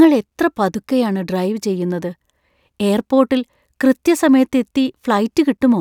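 Listening to this speech recording, nothing technical stood out.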